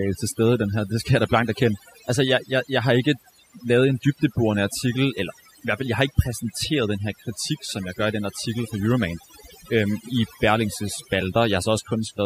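From start to end, overdone noise removal affects the speech: bands near the suppressor's noise estimate are cut individually, so quiet voice detail vanishes and the background drops and breaks up into twinkling specks. A noise gate would mute everything together.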